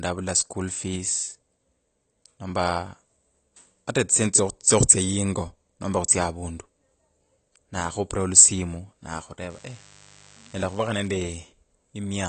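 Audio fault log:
throughout: AAC compression, likely; the speech sounds dull and smeared with a clear warbly texture, with nothing above 8.6 kHz, which fits a low bitrate around 32 kbps.
9.50 to 11.08 s: mains buzz; a quiet, raspy 50 Hz buzz sits well under the speech, from switching spikes leaking in twice every mains cycle.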